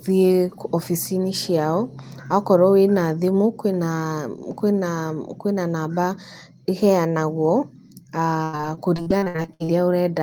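From 8.43 to 9.70 s the speech breaks into repeated packet loss with a robotic sound. Over a dozen short holes, the longest 94 ms, are patched by extending the preceding sound, so about 40% of that stretch is synthetic. It sounds choppy, with pieces missing. A spectrogram shows smeared, repeated harmonic bands between abrupt breaks, and the waveform shows looping, stuttering segments.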